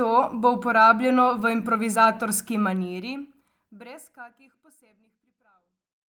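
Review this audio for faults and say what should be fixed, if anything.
Nothing here needs fixing, and the smooth fade-out that begins somewhere around 2.5 s just eases the level down with no click or hard edge at the end.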